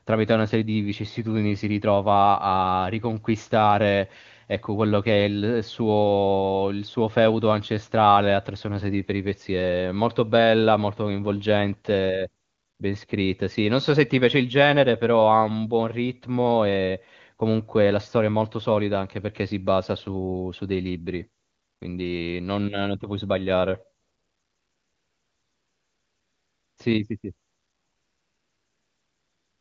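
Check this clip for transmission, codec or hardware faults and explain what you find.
Yes, there is one fault, AMR comfort noise, heard at 12.43–12.79, 21.41–21.81, 24.01–26.77, 27.19–27.23 and 27.47–29.61 s. During these pauses no speech frames arrive, so the receiver substitutes a smooth synthetic hiss for the real background. This differs from a noise gate, which would leave true silence. The wideband coding around it sounds clean, which fits a high AMR-WB rate.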